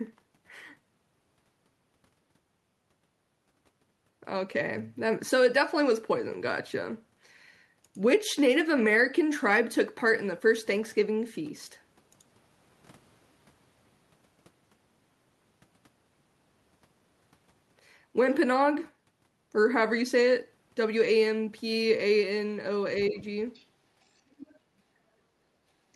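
Other side's voice leaking through appears first from 23.05 to 23.24 s: a faint second voice sits about 20 dB under the talker. This is likely loudspeaker sound from the far end reaching the microphone and surviving the echo canceller. The same leak returns from 23.55 to 23.65 s at roughly 35 dB down, and again from 24.32 to 24.59 s at around 25 dB below the speech, each time as a brief fragment rather than a sustained voice.

Speech suppressed in double talk overlaps the first leak, from 23.10 to 23.15 s. For about 50 ms the talker's level sags by roughly 5 dB, a small, quick dip. The likely cause is the echo canceller meeting both voices at once, failing to separate the near talker from the echo, and turning everything down together.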